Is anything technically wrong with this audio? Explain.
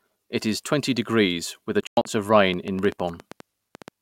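Yes. Between 1.81 and 2.05 s the speech breaks up in what is likely a Bluetooth dropout: packets arriving too late to play. About 160 ms goes silent in gaps scattered across that stretch, the longest lasting about 100 ms. The waveform shows flat holes, and the spectrogram shows blank vertical bands. The speech resumes as though it had kept playing.

From 2.54 to 3.89 s there is a train of clicks, likely from electrical interference or a faulty connection. About fifteen similar pops arrive irregularly, roughly nine per second, peaking a few dB above the speech. They look like thin vertical spikes on the waveform and broadband vertical lines on the spectrogram.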